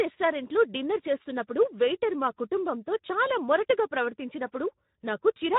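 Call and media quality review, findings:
Speex codec, whole clip: speech plainly damaged, hoarse and noisy, upper band a shaped noise-like fill. Bitrate near 11 kbps gives the CELP excitation too few bits, so fine harmonic detail collapses into hoarse noise. Component: encoder quality setting on the send side, too low for clean speech.

VoIP packet loss concealed by the speech codec, 3.07 to 3.12 s, after "చేస్తున్నప్పుడు వెయిటర్ మా కుటుంబంతో", before "చాలా మొరటుగా". Short concealed gap, about 20 ms missing, consistent with one lost frame. Decoder extrapolated last pitch and filter at falling gain; voice stays weak for a few tens of ms after packets resume. Component: network path, jitter or drop upstream of decoder.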